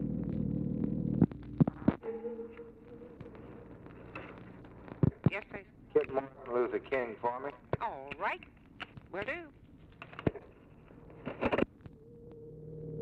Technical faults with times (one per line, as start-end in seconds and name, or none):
none